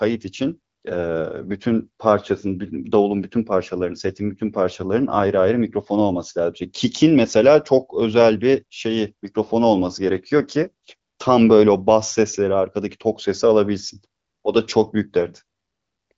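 The speech has passed through the AMR wideband (HD Voice) codec, with nothing above about 7.5 kHz and at most a faint trace of coding, which fits a rate around 18 kbit/s, and no technical faults can be heard.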